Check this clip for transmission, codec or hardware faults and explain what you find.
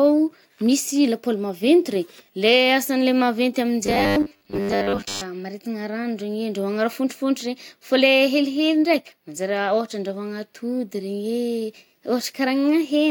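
One fault stands out in this speech. Robotic sound from repeated short buffers, 3.86 to 5.21 s, right after "asan’le maventy": most of that stretch is likely a roughly 10 ms slice replayed while real audio went missing, producing a rigid 100 Hz metallic buzz.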